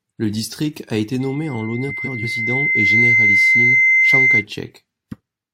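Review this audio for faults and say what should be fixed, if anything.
A piercing 2.1 kHz tone swells over roughly two seconds from 1.20 s to 4.45 s, peaking about 10 dB above the speech: loudspeaker feedback squeal, where the microphone re-amplifies its own loudspeaker output.

Between 1.88 s and 2.25 s the speech flutters and garbles: frames out of order, two adjacent blocks of about 171 ms each played swapped.

Prevent these by lowering monitor gain or notching 2.1 kHz, and by having the receiver reorder frames by sequence number before decoding.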